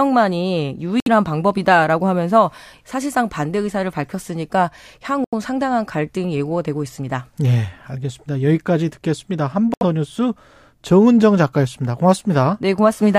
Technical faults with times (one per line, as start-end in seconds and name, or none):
1.00-1.08 Bluetooth stall
5.24-5.34 Bluetooth stall
9.74-9.83 Bluetooth stall